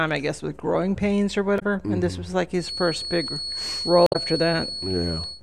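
At 1.56 to 1.62 s a short glitch breaks the speech: damaged data in a compressed stream, where the decoder loses frame sync. From 2.55 s to the end, a thin, steady 4.4 kHz whistle sits roughly 10 dB under the speech, swelling and fading slowly, likely a feedback whistle from a loudspeaker-to-microphone loop held just short of runaway. A second glitch at 4.06 to 4.16 s comes from the same stream damage.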